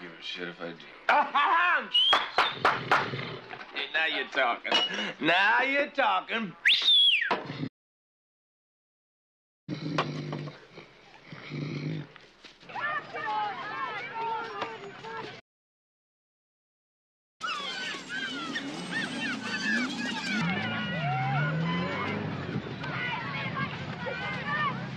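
Playback stall at 7.67 to 9.69 s: the sound cuts out for 2 s, likely because the player ran short of data or its thread was blocked. Catch-up at higher speed at 9.69 to 12.69 s: the backlog is resampled at 1.1x, raising pitch by about a semitone and a half before normal rate returns. A second playback stall at 15.39 to 17.41 s silences the output for another 2 s. Catch-up at higher speed follows at 17.41 to 20.41 s, this time at 1.5x, so the sound is hurried and pitched up by roughly seven semitones.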